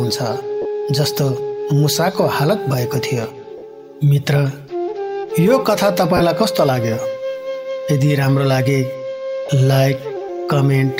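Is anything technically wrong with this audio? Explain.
Yes. There are four short dropouts from lost LE Audio frames, at 0.62–0.66 s, 3.58–3.62 s, 6.17–6.21 s and 9.46–9.50 s. Each lasts about 30 ms, except the second at about 40 ms, which fits three or four 10 ms frames. The LC3 decoder fills each gap by repeating the last spectrum with random signs. This turns tonal content into a brief noisy smear. On a spectrogram, clean harmonic lines blur into diffuse vertical bands, and the waveform shows a short patch of noise-like texture. The light lossy compression leaves at most a faint codec texture.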